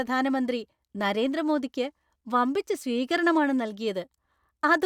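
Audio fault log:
No fault is heard in this speech clip.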